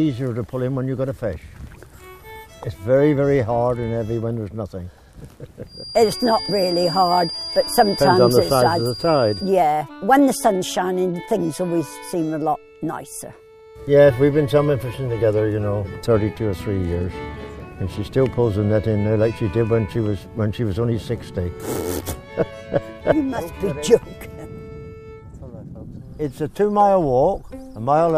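From 5.64 to 9.56 s there's a feedback whistle, a thin steady tone at 4.8 kHz sitting roughly 10 dB under the sound and swelling and fading slowly in level. Likely a speaker-to-mic loop hovering right at the edge of ringing without taking off.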